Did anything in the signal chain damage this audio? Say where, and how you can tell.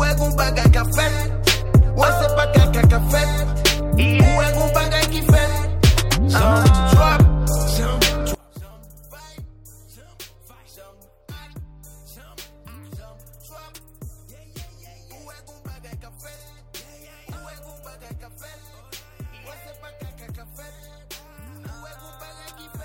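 Yes. From 8.35 s to the end, the level falls by about 25 dB. That points to one channel inverted, likely from a reversed-polarity connection in the analogue wiring. When the two channels are summed to mono, everything common to both cancels, and only their difference survives. On the waveform, the envelope collapses abruptly at 8.35 s and stays low. On the spectrogram, energy drops across the band from that point.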